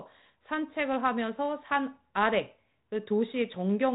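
No faults are audible in the speech; the G.726 ADPCM coding at 32 kbit/s is working as expected, holding the band under 4 kHz with only the light grain that rate leaves.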